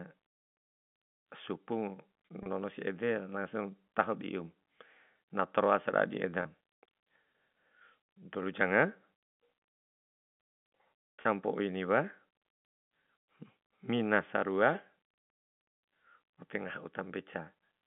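At 2.43, 6.42 and 11.22 s the stream loses 30 ms of speech each time, which fits a single dropped packet. The receiver fills each gap with packet loss with pitch repetition, looping the last pitch period it received and fading it down. Because each gap is short, it comes through as a brief held, faintly buzzy tone in place of the missing sound, heard within the G.711 telephone band of 150 Hz to 3.5 kHz.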